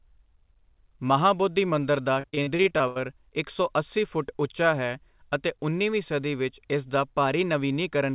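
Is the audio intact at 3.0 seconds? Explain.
No. 3.0 s falls near the end of a stretch of repeated packet loss (robotic sound) running from 2.14 to 3.04 s, just after "ਮਹਾਬੋਧੀ ਮੰਦਰ". About a dozen dropouts, the longest 79 ms, hit this span. Each was patched by extending the preceding sound, so roughly a third of the stretch is concealment. The result is choppy speech with pieces missing, heard over the call path's G.711 band limit at 4 kHz.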